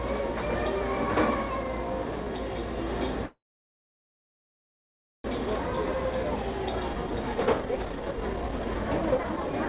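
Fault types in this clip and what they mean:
Call audio freeze: At 3.26 s the sound breaks off and the gap is filled for about 2 s, to 5.26 s. A brief tail carries on from the last bit of audio, then roughly 1.85 s of near silence. When it resumes, it continues exactly where it stopped, so nothing is lost, but everything after runs about 2 s late. The likely cause is packets stalling in transit so the jitter buffer drained and the receiver had to stretch and then wait.
Jitter buffer speed-up: Right after the freeze, from 5.38 s to 9.66 s, the audio plays at about 137% speed with the pitch unchanged. With the delayed audio suddenly piled up, the receiver works off the backlog by repeatedly snipping out tiny pitch-period-sized pieces. Altogether it discards about a second and a half of material, so events feel rushed and crowded together, all within the 4 kHz band of the G.711 call path.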